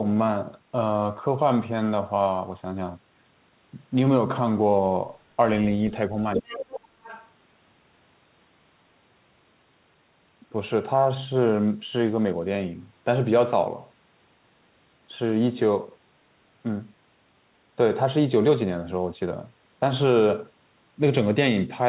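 Other side's voice leaking through, from 6.34 to 6.8 s: a second voice sits under the talker only a few decibels down, nearly as loud as the main speech. It sounds like a far-end talker heard through a loudspeaker and picked up again by the microphone. The likely cause is an echo canceller that failed to strip the loudspeaker's output from the microphone signal, letting the returning sound pass.

Speech suppressed in double talk, from 6.37 to 6.62 s, overlapping that leak: while both voices run together, the talker's own speech drops sharply, at its deepest by about 20 dB, and thins out in pieces for around a third of a second before recovering. With the near and far voices present at once, the canceller likely could not tell its talker from the echo and turned the whole signal down.

A second leak of the other side's voice follows from 7.04 to 7.28 s, this one much fainter, far below the speech: a brief ghostly fragment of the far-end voice that the canceller likely left behind. 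Like the rest of the clip it is confined below 4 kHz, which fits a narrowband telephone codec such as G.711.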